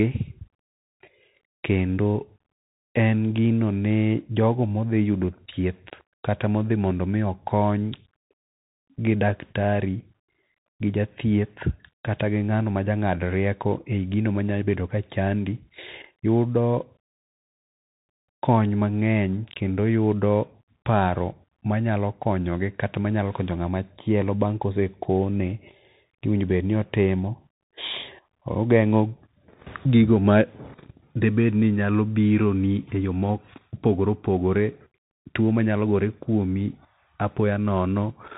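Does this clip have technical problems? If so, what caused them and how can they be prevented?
Yes. Bluetooth CVSD headset codec, throughout: one-bit delta coding, consistent with a 64 kbps link, removes everything above 3.8 kHz, roughens s sounds and adds granular hiss. To prevent it, record with a wired microphone or a headset using a wideband Bluetooth mode rather than the narrowband hands-free link.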